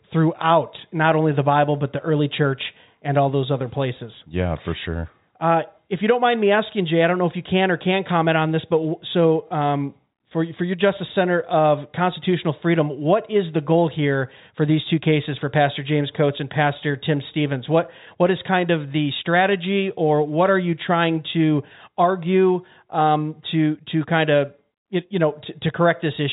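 No faults are audible in the speech, which carries the band-limited character of G.711 telephone coding, with nothing above about 3.8 kHz.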